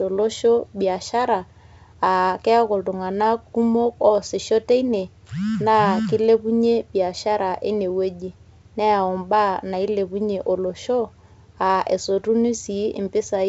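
No technical faults can be heard in this speech, which comes through G.722 wideband telephone coding at 64 kbit/s.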